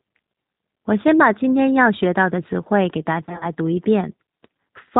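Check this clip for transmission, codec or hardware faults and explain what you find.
Two faults are present: codec coloration across the whole speech clip, and a burst of concealed packet loss late in the clip.

The G.729 codec shapes the entire clip. The decoder rebuilds speech from a vocal-tract filter, a pitch predictor and a handful of pulses per subframe, and the damage here is plainly audible. Nothing above 4 kHz survives, so sibilants lose their edge. Voiced sounds take on a rough, slightly synthetic texture consistent with an 8 kbit/s G.729A stream.

VoIP packet loss concealed by the speech codec occurs from 3.25 to 3.46 s, between "词汇给大" and "读一". About 80 ms of audio is missing, scattered across a 160 ms stretch in gaps no longer than 20 ms. For each gap, the decoder extends its last pitch period and filter at falling gain. The result is a buzzy, smeared, weakened patch. Because each frame's state builds on the previous one, the distortion persists slightly beyond the final gap.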